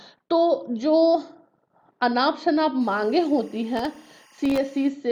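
A faint, steady chirping warble sits well below the main sound from 2.81 s to 4.89 s, alternating between two pitches around 1 kHz and 2 kHz. This is timecode bleed. Linear timecode running at 24 frames per second has leaked into the audio path from a nearby track or cable. Its square-wave code flips between those two frequencies as the bits change, producing that buzzy, rhythmic twitter.

Within the latter part of that stretch, from 3.77 s to 4.58 s, a burst of gritty crackle tears across the sound. This is processor overload crackle. The processor fell behind and missed a few dozen buffer deadlines in a row. Each miss dropped in a sliver of silence with hard edges, and the gaps are short enough to point to very small buffers, under a millisecond each. Strung together, these dropouts fuse into the rough tearing texture, which clears once the load eases.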